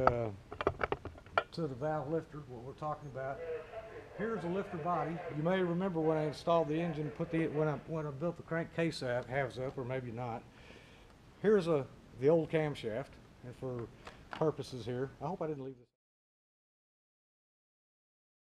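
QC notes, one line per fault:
Nothing stood out on listening, apart from the smooth fade-out that begins around 15 s and is complete by 15.97 s.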